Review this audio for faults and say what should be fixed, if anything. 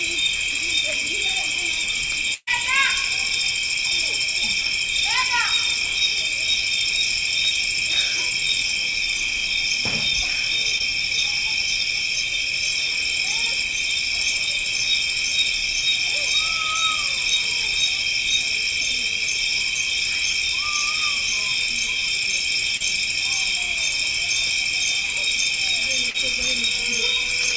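A burst of packet loss runs from 2.34 to 2.49 s. The receiver stretches the last sound for about 130 ms while fading it, then about 40 ms of silence, and 140 ms of audio is skipped. The fade to silence and the clear jump distinguish it from the shorter losses.

Short concealed packet loss occurs at 10.78 s, from 22.77 to 22.82 s, and from 26.10 to 26.16 s. Each fills a 20 to 40 ms hole with continued sound and blends back, so each is heard as a brief smear with no fade-out or audible gap.

A larger jitter buffer with forward error correction or redundancy on the network path would prevent both.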